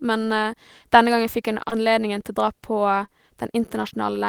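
At 1.69–1.73 s and again at 3.05–3.10 s, short concealed packet loss: about 20 ms of speech arrived too late, so the decoder extended the preceding sound and crossfaded back. Each sounds like a brief smear, and spectrograms show the preceding sound continued across the gap.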